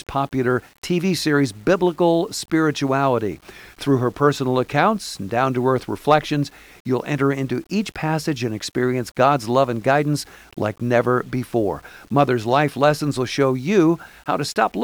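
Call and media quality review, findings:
Grainy, signal-following distortion on speech throughout, quiet tails gritty or sputtering; likely low bit depth without dither, fits 8-bit rounding, error roughly 35 dB down.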